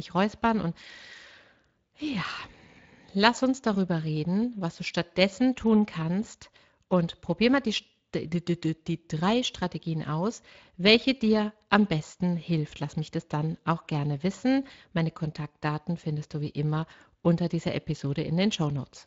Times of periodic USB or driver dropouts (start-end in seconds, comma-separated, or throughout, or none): none